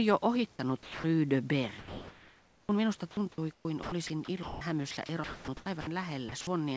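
At 0.83 s the speech gives way to a steady, featureless hiss for about 210 ms, until 1.04 s, and roughly 170 ms of actual sound is lost. This is sound dropped by the voice detector, likely because the sender judged a quiet stretch to be background and stopped transmitting.

From 1.79 to 2.69 s, comfort noise in place of the background takes over. The real room noise, about 34 dB below the speech, is swapped for smooth synthetic noise about 2 dB quieter, which likely comes from the sender pausing transmission while the receiver fills the gap.

Sound chopped by the voice detector follows in three stretches: 3.11 to 4.61 s with about 570 ms replaced, 4.91 to 5.87 s with about 480 ms replaced, and 6.29 to 6.47 s with about 90 ms replaced. Each stretch has holes where the sound is replaced by comfort noise, likely from the detector toggling on and off. Across the clip nothing is present above 8 kHz, which fits a wideband call codec such as G.722.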